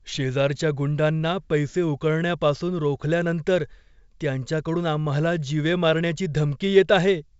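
Nothing stood out on listening to this speech, which carries the band-limited sound of G.722 wideband telephone coding at 64 kbit/s, with nothing above about 7.7 kHz.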